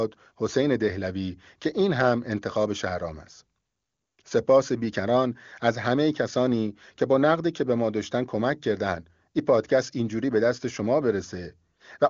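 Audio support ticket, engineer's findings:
Engineer's findings: no audio fault found in this speech clip.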